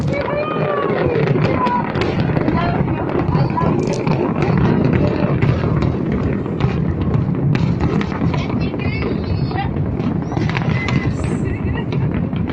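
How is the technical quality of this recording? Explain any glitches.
The audio has one noticeable glitch: a stretch where it turns coarse and dull before clearing again.

Call bitrate drop, from 1.74 s to 4.81 s: the sound grows rough and watery, losing its top end, and is at its worst for about 1.75 s before recovering. The pattern points to the call's bandwidth estimate falling and the Opus encoder being told to roughly halve its bitrate, from about 32 kbps to 16 kbps. With fewer bits, it codes detail more crudely and trims the highs. Outside this stretch, the Opus call path's band limit sits around 12 kHz.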